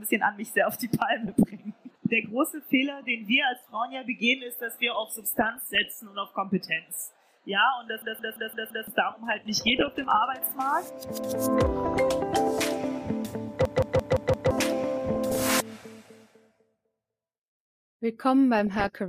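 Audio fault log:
1.26–1.50 s, 4.95–5.86 s, 9.29–10.20 s, 11.69–11.99 s, 15.09–15.55 s, 18.55–18.88 s: DAB burbling. Short noise blips and level jumps sit over the programme. Weak reception let bit errors slip past error correction into the MP2 data. Corrupted samples put short noise blips in single sub-bands, and corrupted scale factors make sub-bands jump in level for up to a frame.
8.02–8.88 s and 13.65–14.51 s: system hang loop. Each has a machine-gun stutter: one 170.67 ms fragment repeats exactly five times at 5.86 Hz, which fits an 8192-sample ring buffer. The host froze while the hardware kept cycling that buffer, losing about a second of audio each time.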